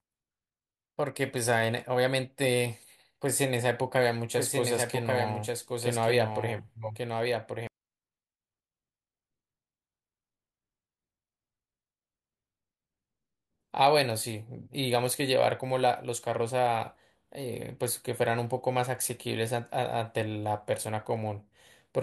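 A speech recording with a doubled audio track from 4.37 s to 7.67 s: a second full-band copy of the speech runs about one second behind the original and roughly 5 dB quieter, likely from the same signal being captured again through a slower path. Unlike an echo or room reverb, the copy has no decay or room colour, and it cuts in and out abruptly at the start and end of that stretch.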